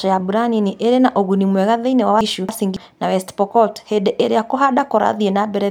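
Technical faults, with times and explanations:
2.21–2.77 s, frames out of order: two adjacent blocks of about 0.28 s each play swapped, giving a garbled flutter. Unlike a dropout or a repeat, nothing goes missing or plays twice, and the speech's timing stays intact.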